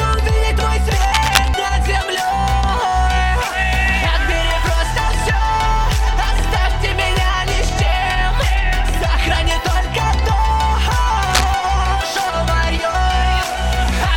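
A worn cable or connector likely shifting causes cable scratch noise from 1.00 to 1.48 s and 11.27 to 11.45 s: dense, uneven scratching bursts, nearly as loud as the sound.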